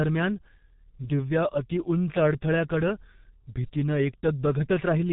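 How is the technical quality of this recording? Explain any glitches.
Technical quality is poor, because heavy G.723.1 codec damage runs through the whole speech clip. This early internet-telephony coder sends speech in 30 ms frames at a very low rate, which fits about 6.3 kbit/s, and nothing above 3.8 kHz survives. It models the voice coarsely and updates that model slowly, so the speech sounds muffled and hoarse, with smeared consonants. On a spectrogram the energy stops flat at 3.8 kHz, and the harmonics look blurred and blocky in time.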